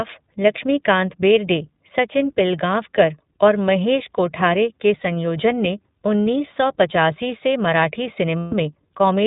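A speech recording with a narrow, slightly rough and synthetic quality from start to finish, with no content above 4 kHz and a clearly audible coding texture. That points to the iLBC codec, a narrowband VoIP coder that encodes each short frame's excitation independently of its neighbours. The character fits its 20 ms frame mode at around 15.2 kbps, where the band limit and the coarse excitation coding give the voice its thin, processed edge. Near the end, from 8.38 to 8.54 s, the sound turns into a held, faintly buzzy, breathy vowel-like tone for about 140 ms before normal speech returns. These are lost iLBC frames, consistent with seven consecutive 20 ms packets going missing. The decoder covers the gap by repeating the last pitch cycle blended with noise, and because each iLBC frame decodes on its own, normal speech resumes as soon as packets arrive again.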